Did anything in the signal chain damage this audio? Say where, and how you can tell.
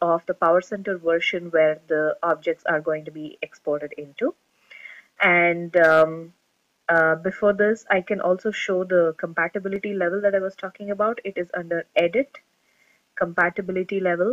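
Yes. Hard clipping occurs at 0.43–0.46 s, 2.30 s, 5.24–5.26 s, 5.77–6.03 s, 6.95–7.00 s and 13.38–13.41 s, probably where the level hit full scale at the converter or a fixed-point format conversion. Most peaks barely touch the limit; the longest, near 6 s, overshoots by about 1 dB. Each sounds like a brief crackle. The waveform shows tops sliced flat, and the spectrogram shows vertical streaks of harmonics reaching high into the kHz range.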